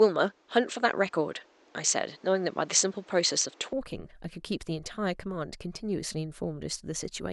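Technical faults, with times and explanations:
0.0–3.73 s, input switched to a poorer device: speech sounds dull and boxy, with nothing above 8.2 kHz and a separate noise floor some 30 dB down, likely from a narrower-band microphone. At 3.73 s the spectrogram's empty top band fills and the waveform level steps around 5 dB, without a gap.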